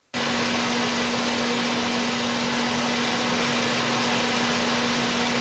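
From 0.12 s to the end, a faint delayed copy of the speech trails the original by about 235 ms. It sits roughly 15 dB below the direct speech. This echo leak is likely from a far-end loudspeaker whose echo canceller let the pickup through.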